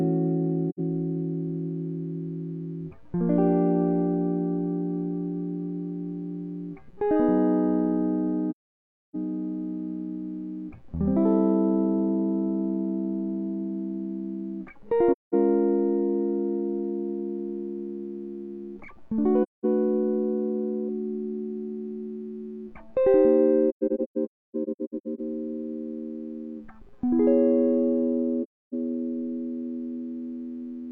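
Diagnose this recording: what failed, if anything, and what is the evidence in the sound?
The failure is at the codec stage: AAC frame loss with muting. The music drops to silence with soft, faded edges at 0.69, 8.50, 15.12, 19.42, 23.69 and 28.43 s. Gaps last from about 85 ms to 640 ms. From 23.69 to 25.21 s the holes are scattered, the longest near 0.3 s. Missing frames were decoded as zero spectrum. Overlapping windows faded each hole in and out. The shortest gap fits two lost frames.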